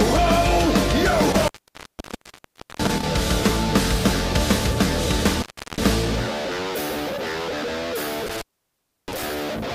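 Intermittent contact at 1.24 to 3.04 s, 5.35 to 5.85 s and 8.26 to 9.23 s: a loose cable or plug briefly opens the signal path, cutting the sound out for about 1.3 s, 0.36 s and 0.66 s, with crackle where contact breaks and returns and faint hiss between.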